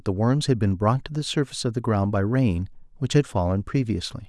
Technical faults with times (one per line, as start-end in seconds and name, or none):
none